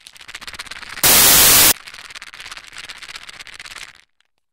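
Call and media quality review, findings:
Loud broadband noise, 1.04–1.72 s. Samples built from the wrong bytes. Sample reader assembles bytes wrongly, so the low bits dominate.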